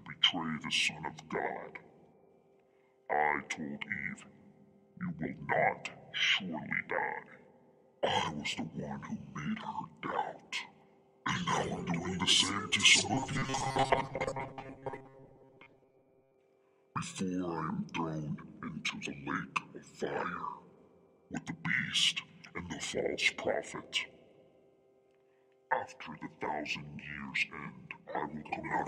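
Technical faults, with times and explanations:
13.14–16.35 s, robotic sound from repeated short buffers: a rigid metallic buzz at 134 Hz, likely from an about 7.5 ms block repeated while most incoming audio is skipped.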